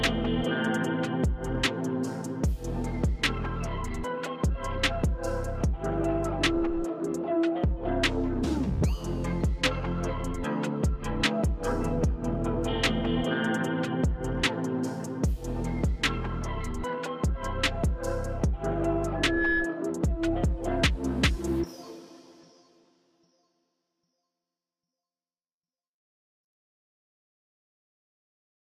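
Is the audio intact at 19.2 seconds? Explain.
No, loudspeaker feedback squeal runs from 19.15 to 19.92 s: a 1.7 kHz tone swells over about a third of a second to a few dB above the sound, unlike a steady interfering whistle.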